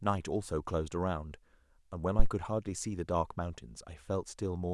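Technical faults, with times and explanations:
2.19 to 2.27 s, phantom power thump: a single deep thump peaking at about -10 dBFS, which decays quickly, with a decay time of 18 ms. A supply switched on or off on a live input produces a DC step, and the coupling capacitors pass it as one low-frequency surge that settles exponentially. Unlike a plosive pop, it has no breath or speech onset. Unlike handling noise, it is one clean thump rather than rumble or scraping.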